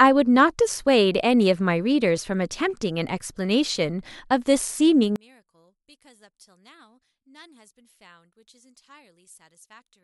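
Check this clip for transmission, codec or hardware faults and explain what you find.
One fault is present. From 5.16 s to the end, the speech drops by about 32 dB to a faint trace, with its centre gone. The likely cause is one channel inverted, so content shared by both channels cancels when they are summed to mono.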